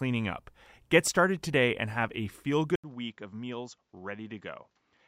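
At 2.76 s the speech breaks off for about 80 ms, then returns duller and quieter, roughly 10 dB down, with nothing above 7.6 kHz and a faint new background noise sitting well beneath it. That character holds to the end of the clip. The likely cause is the input switched to a poorer device: the system swapped to a different, narrower-band input partway through, bringing its own tone, level and noise floor.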